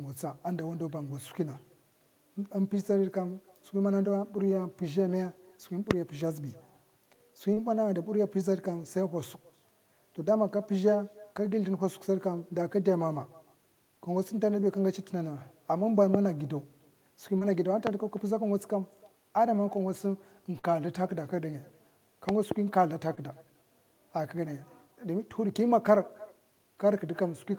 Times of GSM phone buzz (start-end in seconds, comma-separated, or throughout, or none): none